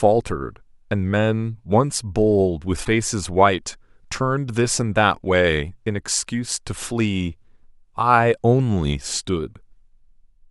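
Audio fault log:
2.81–2.88 s, damaged data in a compressed stream: a quick blip, about 70 ms long. A stretch of the encoded data got corrupted there, so the decoder misread those frames, lost sync and had to find the next clean frame header before it could carry on.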